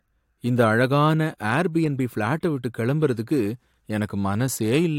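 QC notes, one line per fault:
No faults found in this speech clip.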